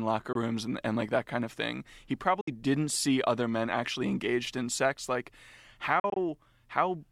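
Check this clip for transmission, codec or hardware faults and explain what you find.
Three short silences cut into the speech, each most likely a Bluetooth dropout. At 0.33 to 0.36 s, just before "rooms and and like", about 20 ms vanishes; at 2.41 to 2.48 s, before "didn't see other men", about 61 ms goes; from 6.00 to 6.17 s, 81 ms is lost in scattered gaps, the longest 41 ms. Late packets never reached the headphones, so output stopped and the speech resumed further on, skipped rather than delayed or smeared over by concealment.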